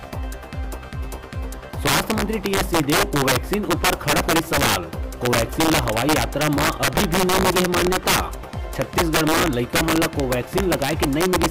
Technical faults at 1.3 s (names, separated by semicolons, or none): integer overflow